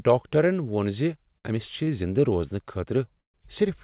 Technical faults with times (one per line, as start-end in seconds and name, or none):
1.38-1.46 short stall from a late packet
1.84-1.89 short stall from a late packet
3.20-3.36 call audio freeze